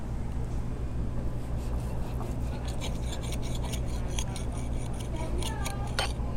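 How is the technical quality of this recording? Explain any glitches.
The signal is technically sound, with nothing audible that points to a problem in how the sound was captured, processed or reproduced.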